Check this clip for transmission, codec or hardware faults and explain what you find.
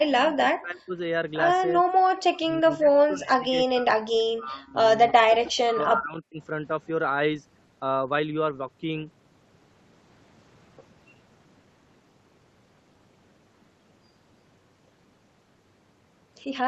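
The speech drops out in four stretches, most likely speech suppressed in double talk: 0.04–0.95 s, 2.22–3.99 s, 4.36–4.76 s and 5.12–6.38 s. The echo canceller seems to mistake the near talker for loudspeaker echo while the far side is also active, and it attenuates everything. The voice sinks by about 35, 40, 25 and 40 dB in those spans. The call path's 8 kHz band limit stays constant throughout.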